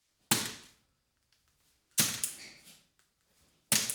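No technical faults can be heard anywhere in this clip.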